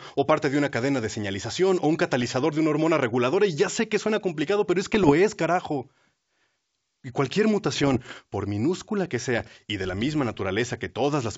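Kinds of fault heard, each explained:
Bit errors on an ADPCM link: flipped bits derail the decoder's step size and predictor, causing four rough, popping bursts, seen as broadband vertical smears and jagged waveform spikes with brief level jumps.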